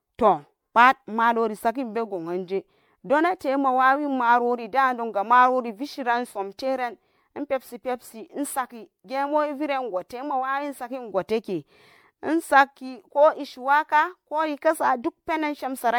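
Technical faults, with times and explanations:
Throughout, generation loss: the speech has a swirly, watery smear and a hollow, scooped-out quality that's heavier than a single lossy pass would leave, and consonant attacks go soft and blurry. That's likely from the audio being decoded and re-encoded around five times, each pass quantising on a shifted frame grid so the noise and spectral holes stack up. It fits a 96 kbit/s MP3 chain, and nothing survives above about 19.9 kHz.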